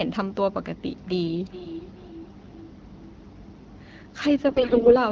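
A speech clip with two faults. From 1.05 s to the end, feedback echo between two devices is heard: a second device in the room replays the call audio, the microphone picks it up again, and the local echo canceller cannot remove sound it did not play itself. Each phrase returns about 0.4 s later, thinner and more metallic, peaking at about 16 dB below the direct speech. On a waveform this shows as faint copies trailing each syllable at a fixed lag. A spectrogram shows ghost harmonic stripes repeated at that spacing. From 4.48 to 4.96 s, AMR bit errors make the voice hoarse, scratchy and gargly while its pitch and loudness roughly hold. A weak radio link flipped a large share of the less protected bits, so the excitation pulses and fine spectral values decode wrongly. The length of damage fits roughly two dozen corrupted frames. The spectrogram shows smeared, noisy harmonics and broadband grit in that span instead of clean striations.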